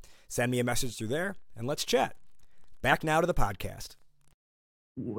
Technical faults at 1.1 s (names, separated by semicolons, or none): DC step